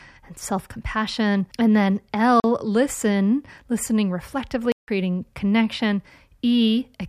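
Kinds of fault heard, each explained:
Block of digital silence: The speech drops out twice, with no fade in or out. The 40 ms gap at 2.40 s, just before "listen listening", is heard as a short hole. The 160 ms gap from 4.72 to 4.88 s is heard as a distinct hole. On the waveform each is a near-flat line. The spectrogram shows a blank column.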